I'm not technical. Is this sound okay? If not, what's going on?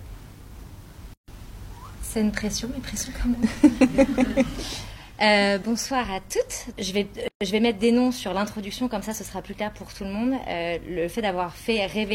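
No. The sound briefly drops out to silence at 1.14 s and again at 7.28 s, each time for about a seventh of a second, then picks up where it stopped. This is a gap at a join of encoded pieces: separately compressed six-second chunks were stuck together with their built-in padding left in.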